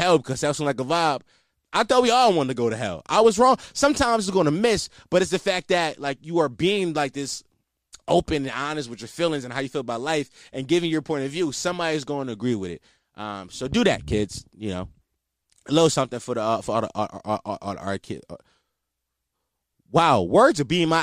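No audible technical faults here.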